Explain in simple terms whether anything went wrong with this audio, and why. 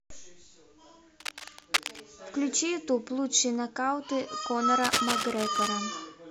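Yes, something went wrong: there's cable scratch noise twice, from 1.20 to 2.01 s and again from 4.78 to 5.70 s. A fairly loud, uneven scratching rustle sits over the speech, most likely a worn cable or connector being moved and briefly losing good contact.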